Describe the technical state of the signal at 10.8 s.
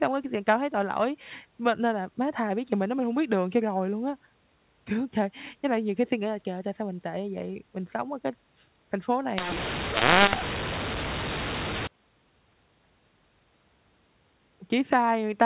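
At 10.8 s the speech sits inside a mu-law and A-law mixed up span, 9.38 to 11.87 s, beginning just after "ở cái thành phố": A-law bytes decoded as mu-law scramble levels, giving harsh distortion, a jagged waveform and noise filling gaps on the spectrogram.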